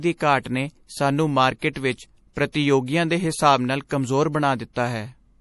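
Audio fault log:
Throughout: MP3 compression, likely at a low bitrate around 48 kbps. Nothing is present above 11.5 kHz, so the treble is cut flat, and weak frequency lines dropping in and out between frames give the speech a watery, swirly texture with metallic edges on s sounds.
1.73 to 1.76 s, 2.52 to 2.54 s, 3.88 to 3.91 s: pre-echo, a short hiss of about 23 to 27 ms ahead of sharp onsets, after "ਘਾਟ ਨੇ ਸਾਨੂੰ", before "ਦੇ ਹਿਸਾਬ ਨਾਲ ਕਮਜ਼ੋਰ", and after "ਦੇ ਹਿਸਾਬ ਨਾਲ". The codec spreads noise meant for the attack across the quiet start of its block, softening each onset.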